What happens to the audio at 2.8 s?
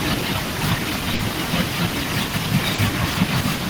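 A short stall from a late packet runs from 2.74 to 2.79 s. The jitter buffer ran empty, so the receiver stretched the last sound for about 40 ms. It sounds briefly held, with nothing lost. Clock drift between sender and receiver runs throughout, with the sender's clock about 3% slow. This causes small, uneven timing hiccups.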